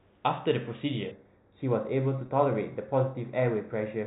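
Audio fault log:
1.11 s to the end of the clip: channel delay (comb filtering). One channel runs roughly 0.15 ms behind the other, and summing them to mono cancels the shared content where the two arrive out of phase. The first notch lands around 3 kHz, and the next would fall above the 4 kHz ceiling of the telephone band. The speech turns hollow and dulled in its upper range. On a spectrogram, a steady dark horizontal band sits near 3 kHz from 1.11 s onward.
2.26 to 2.28 s: packet loss with pitch repetition. About 20 ms of audio went missing, which fits a single lost packet, and the receiver filled the gap by repeating the last pitch period. Because the gap is so short, it comes across as a brief held, buzzy smear rather than a dropout. The waveform shows a run of repeated, fading cycles, and the spectrogram shows a short stretch of frozen, evenly spaced harmonic lines.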